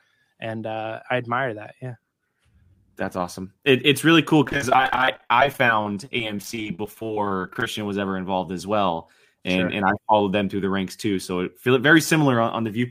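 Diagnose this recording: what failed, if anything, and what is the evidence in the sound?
Repeated packet loss (robotic sound) at the network stage, 4.44 to 7.80 s, between "it's really cool" and "was ever involved as". Dozens of holes up to 32 ms are patched by extending prior sound, about a quarter of the span, giving choppy, robotic audio. Spectrogram: dense vertical seams, smeared repeated harmonics.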